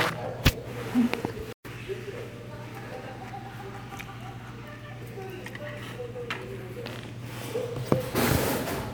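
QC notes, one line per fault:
1.53–1.65 s, playback stall: the player most likely ran short of buffered data or had its output thread held up, so nothing reached the output for about 120 ms. The sounds cut to dead silence partway through. When data flowed again the audio picked up after the gap. That abrupt hole is why it reads as a dropout in delivery rather than a pause in the sound itself.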